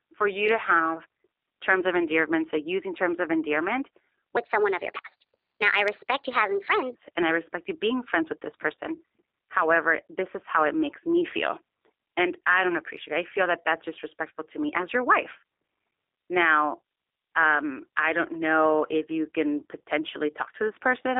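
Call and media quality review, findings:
G.729 codec throughout: the speech has been squeezed through a low-rate model of the voice, with filter, pitch predictor and a few pulses per 5 ms subframe, consistent with an 8 kbit/s G.729A stream. Plainly audible roughness and synthetic buzz, band limited to about 300 Hz to 3.7 kHz.

Section at the wrong speed, 4.37 to 6.95 s, from after "using terms of endearment" to just before "and I respect you": playback runs 1.25 times too fast, likely from a clock mismatch in the player or editor. Speech sounds hurried and raised by about four semitones.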